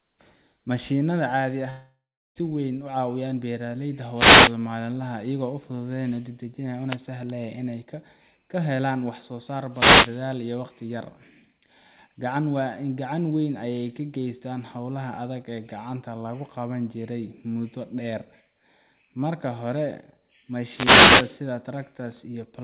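A speech recording carried over a call link, with no content above 4 kHz, which fits a G.711 A-law path. At 1.7 s the sound stops arriving, and this is likely a long network dropout. The last sound is stretched into a fading buzz or hiss. Then there is about 0.34 s of silence. Speech returns at 2.38 s, but about 0.66 s of it is gone for good. The receiver only concealed the gap. It did not recover what was lost. There are four wireless microphone noise hits: 4.13–4.55 s, 6.87–6.98 s, 9.71–10.15 s and 20.62–21.44 s. Each one is a swish or burst of static over the speech. The analogue FM radio signal fades as reflections cancel it, so receiver noise rises. The last hit is the longest, at about 0.8 s.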